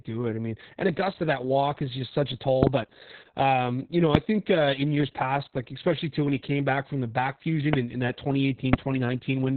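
From start to finish the speech sounds muffled, hoarse and faintly robotic, as if heard down an old phone line. This is Opus voice compression working at a very low rate. The SILK coder has cut the band to about 4 kHz, narrowband, and coded the voice's excitation only roughly, so the damage is heavy. That fits a bitrate of around 6 kbps with long 60 ms frames.

From 4.15 to 4.17 s, just after "but um you know" and before "think uh in years", a single sharp loud pop jumps out about 20 dB above the speech, and the talking carries on beneath it. A second single pop, also about 20 dB above the speech, comes from 7.73 to 7.76 s, between "back from the back" and "in in that". Each is likely a brief voltage spike from a plug, switch or static discharge.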